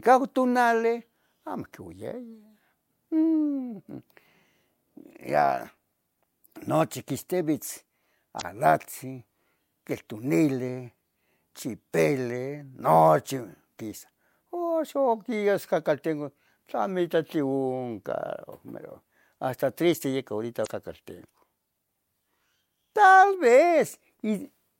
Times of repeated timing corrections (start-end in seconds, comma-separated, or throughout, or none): none